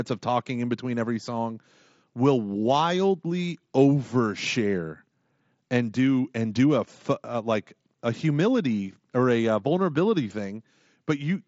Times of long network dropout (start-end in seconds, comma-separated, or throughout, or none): none